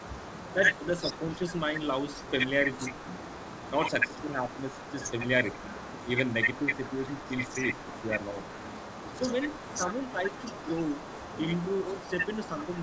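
From the very start to the end of the speech, there's an echo leak: a faint second copy of the talker trailing about 0.39 s behind, sitting about 15 dB under the main voice. That's likely a far-end loudspeaker whose echo canceller didn't fully scrub what its mic picked up, so the residue got sent back. It rides along the whole way, and like everything else here it stops at 8 kHz, which fits the G.722 path at 64 kbps.

On top of that, the voice dips in four spots: 0.55 to 1.46 s, 6.6 to 8.13 s, 9.15 to 10.27 s and 11.87 to 12.72 s. This is speech suppressed in double talk, likely the canceller hearing both sides at once and turning everything down. Each dip is only a few dB and brief, a fraction of a second in most spans and closer to half a second around 7 s. It sounds like the talker briefly ducking back from the mic.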